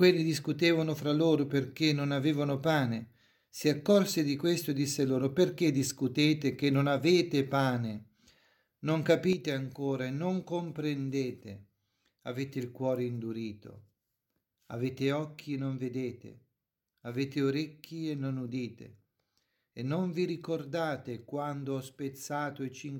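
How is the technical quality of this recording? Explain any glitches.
The recording has one clear glitch. One channel drops out from 9.33 s to the end: the level falls abruptly by about 6 dB, likely because one stereo channel was lost before the mono sum.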